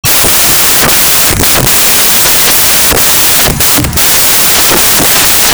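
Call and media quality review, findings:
Samples built from the wrong bytes, entire clip, 0 to 5.5 s. Loud broadband hiss replaces the speech. Probable component: decoder or file reader misassembling bytes through an offset, swapped byte order or wrong alignment, so noisy low bits become each value's high part. Spectrogram: flat, dense energy across all frequencies. Waveform: dense random fill.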